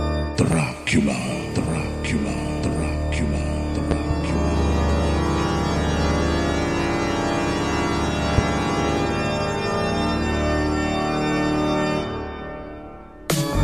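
A loud pop lands at 0.52 to 0.55 s, a double pop spans 3.91 to 4.13 s, and another single pop falls at 8.38 to 8.41 s. Each jumps roughly 15 dB above the surrounding level as a sharp thump, likely from a voltage pulse entering the chain from a plug, switch or static discharge. The audio keeps running underneath, with no gap or repeat, which sets these apart from dropouts or buffer glitches.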